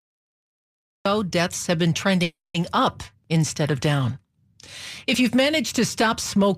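A speech recording with two faults. Cut-off start: the recording began late, so the clip is digital silence until 1.06 s, then speech enters abruptly mid-sound with no natural attack. Call audio freeze: packets were likely held up and the jitter buffer ran empty at 2.23 s. The last sound is stretched and then falls silent for about 210 ms until 2.56 s. Speech resumes where it stopped, so 310 ms of gap was inserted with nothing lost.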